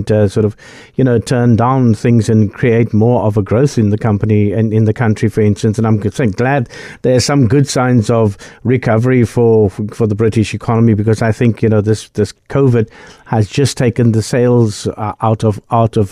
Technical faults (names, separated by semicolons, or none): none